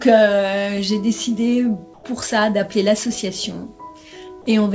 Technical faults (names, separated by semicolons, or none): comfort noise in place of the background